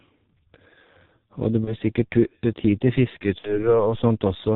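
Speech, squeezed through the G.723.1 codec the whole way: muffled, hoarse, nothing above 4 kHz, smeared consonants, all pointing to its 6.3 kbit/s mode. VoIP packet loss concealed by the speech codec shows up twice. At 1.65–1.75 s, about 30 ms of audio goes missing. At 3.38–3.74 s, it's about 60 ms. Both times the decoder fills the gap by stretching the last sound out and fading it, and the audio stays weak or distorted for a while afterwards.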